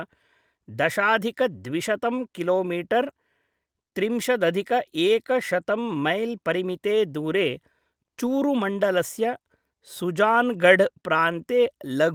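A lost packet rebuilt from error correction occurs at 8.25 to 8.27 s. One packet of this speech failed to arrive, but the packet after it carried a reduced-bitrate duplicate, as Opus in-band forward error correction allows. The decoder substituted that copy, so no gap opens. The 20 ms of rebuilt audio is coarser than its surroundings, with a short patch of added roughness and noise where the lower-quality copy stands in for the original.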